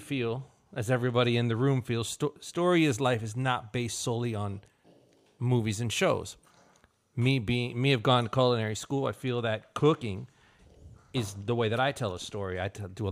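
No technical faults can be heard anywhere in this recording.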